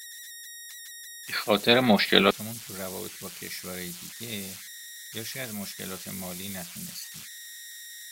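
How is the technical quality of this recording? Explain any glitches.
The recording is compromised by converter idle tones running through the whole clip. The delta-sigma converter appears to be working without dither, so when the speech signal gets small it settles into repeating bit patterns instead of random noise. Those patterns come out as a whistle around 2 kHz, sitting at about 14 dB below the speech, plainly audible in the pauses and roughening the quieter stretches of speech with a grainy, tonal edge.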